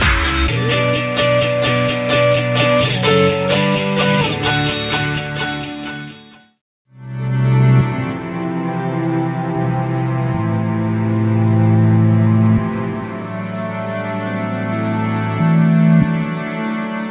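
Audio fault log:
Nothing to log here, as I didn't catch any faults anywhere in this audio.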